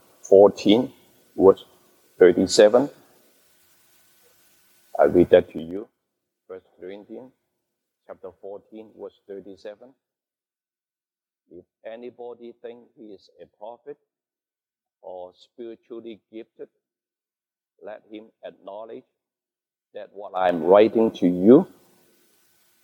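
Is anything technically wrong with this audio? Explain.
Yes. Zipper noise occurs from 5.37 to 5.89 s, as the level falls by roughly 25 dB, and from 20.22 to 20.57 s, as it rises by a similar amount. The gain moves in unsmoothed 3 dB jumps, about fifteen and twenty per second, and each jump clicks, producing an audible ticking.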